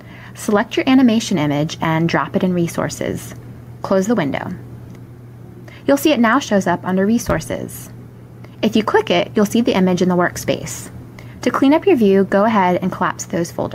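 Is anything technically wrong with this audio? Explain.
Yes. Gain pumping runs through the whole clip. The level swings by around 5 dB. The likely cause is input gain set far too high, with a fast limiter or compressor clamping down on each peak and releasing in the pauses. Loud and soft passages sit squashed close together.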